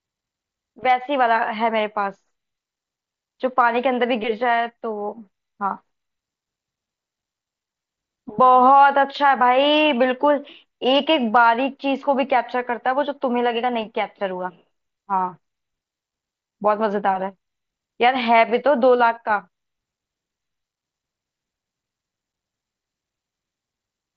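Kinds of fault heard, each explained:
No kinds of fault are heard in this speech clip.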